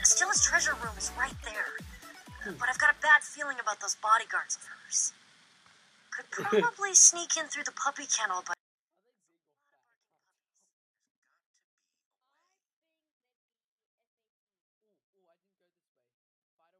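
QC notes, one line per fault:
8.53–16.8 s, 24-bit alignment error (too quiet): at 8.53 s the sound stays clean but falls by about 48 dB and is barely audible. This fits 24-bit samples sitting in the low bytes of a 32-bit word being read as full 32-bit values.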